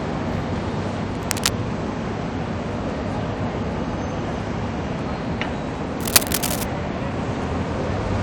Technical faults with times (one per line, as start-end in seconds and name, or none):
1.15-1.49 cable scratch noise
6.00-6.64 cable scratch noise